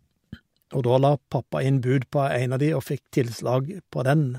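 No technical faults are audible anywhere in the speech recording.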